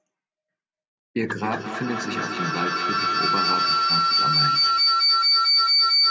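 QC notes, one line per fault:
1.44–6.11 s, feedback howl: two devices in one room share the call, so loudspeaker output re-enters the microphone and gains level on every trip round the loop. The repeats grow rather than fade and narrow to the loop's favoured frequency, a piercing tone near 5 kHz, inside the call path's 8 kHz band. Each trip round the loop takes roughly a fifth of a second; the howl peaks about 9 dB above the speech and runs to the end of the clip.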